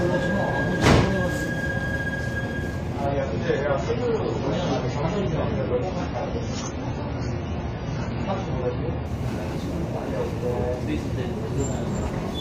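At 3.06 s the audio drops abruptly to a lower-bitrate rendition of the adaptive stream, with no gap at the switch. Nothing survives above 7 kHz, so the top end goes dull, and coding artefacts become more audible, consistent with a fall from around 96 kbit/s to around 16 kbit/s AAC. Full bandwidth returns just as suddenly at 9.06 s, once the player steps back up.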